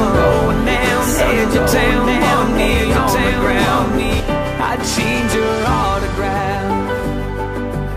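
The audio has a doubled audio track from the start until 4.2 s: a second full-band copy trails about one and a half seconds behind at roughly equal loudness, then stops abruptly. Unlike an echo, it has no decay or room colour. It is likely from the same audio being captured twice through a slower path.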